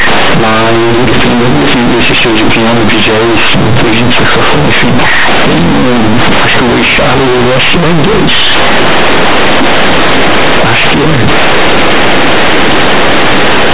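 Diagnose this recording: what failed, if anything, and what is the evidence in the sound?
Sample-format conversion failed: companded audio read as linear, with mu-law bytes played as raw 8-bit samples, so the speech comes out loud, buzzy and harshly distorted throughout, with noise filling the pauses.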